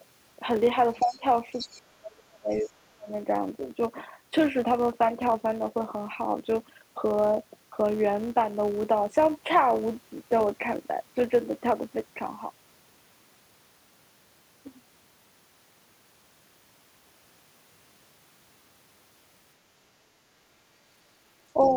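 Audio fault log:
Throughout: filter restarted on every block. A buzz near 172 Hz rides under the speech and swells and fades with its level. Each block seems to start from cold, and the tick at every boundary fits a 256-sample block.
1.0 to 1.17 s, 1.53 to 1.82 s and 2.52 to 2.7 s: other side's voice leaking through. Bits of a second voice slip in underneath, at about -25, -15 and -30 dB against the speech. That's likely loudspeaker playback the echo canceller didn't fully strip from the mic.
1.01 to 1.23 s, 1.68 to 3.11 s and 21.53 to 21.72 s: speech suppressed in double talk. The main voice ducks for a fifth of a second, then about a second and a half, then briefly again. It drops about 15, 30 and 5 dB, likely the canceller turning everything down while both sides overlapped.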